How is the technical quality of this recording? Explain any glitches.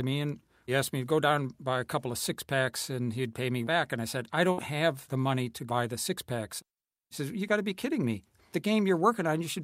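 The recording has one glitch, a burst of packet loss from 4.51 to 4.60 s. A run of audio packets arrived too late or not at all. The receiver stretched the last speech sound for about 58 ms, fading it down, then resumed with about 60 ms missing.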